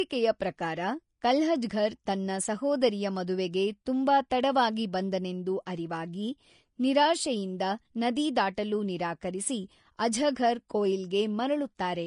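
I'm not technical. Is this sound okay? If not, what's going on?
No. The whole clip has a hissy, grainy edge. The speech sounds dull, because nothing above about 10.5 kHz is left. Fine detail in the upper sounds has turned into a rough fizz. This is most likely Vorbis compression. It is a way of shrinking audio files, set here to a low quality. At that setting the treble is stored so coarsely that the crisp parts become noise.

There are also two brief smears of hiss, a type called pre-echo. The first is at 4.30 s, just after "ತನ್ನ ಸಹೋದರಿಯ ಮದುವೆಗೆ ತುಂಬ" and before "ತಡವಾಗಿ ಬಂದೆನೆಂದು". The second is at 5.66 s, right after "ಮದುವೆಗೆ ತುಂಬ ತಡವಾಗಿ ಬಂದೆನೆಂದು". Each lasts about 10 to 12 ms. The codec spreads its noise across a short chunk of sound. So hiss leaks into the quiet moment before a sharp sound, and the start of that sound is softened.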